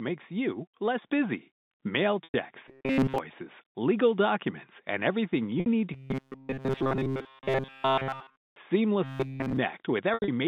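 At 1.02 s the call software raises the microphone's input volume in one step, so voice and background jump up together by about 4 dB.

At 2.24 s, 5.60 s and 10.14 s, packets are lost and the receiver repeats the last pitch period to fill each gap. This packet loss with pitch repetition covers 100 ms, then 60 ms, then 120 ms scattered over 140 ms with an 80 ms longest run. Each sounds like a briefly held, buzzy tone that fades before speech resumes.

From 2.68 to 3.18 s, 5.94 to 8.56 s and 9.04 to 9.57 s, new audio likely arrives too seldom, so the software replays a tiny stretch in place of essentially all the real sound. This robotic sound from repeated short buffers imposes a rigid, metallic 133 Hz buzz, which fits a repeated buffer of about 7.5 ms, while still loosely following the speech.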